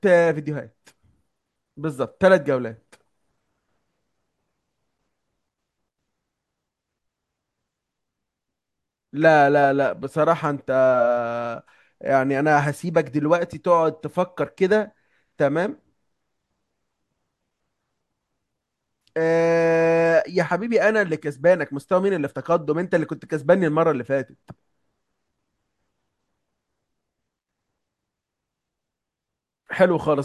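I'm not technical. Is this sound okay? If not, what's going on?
Yes, nothing in this recording points to a technical fault: no dropouts, glitches or distortion anywhere.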